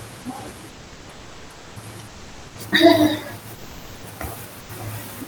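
Comfort noise in place of the background appears in the pauses of this speech clip at 0.69–1.76 s, 2.07–2.55 s, 3.55–4.03 s and 4.60–4.69 s. The real room noise drops to a flat, featureless noise about 1–3 dB quieter, likely from Opus discontinuous transmission synthesising filler during silence.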